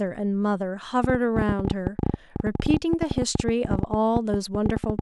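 From about 1.04 s right through to 5.0 s there's a train of clicks riding over the speech, roughly 12.7 a second but unevenly spaced, so it reads as a jittery ticking rather than a steady buzz. There are around fifty of them, each much the same sharp pop, poking something like 15 dB above the speech and heard in the gaps too. Most likely it's interference from nearby gear or a faulty connection or power supply.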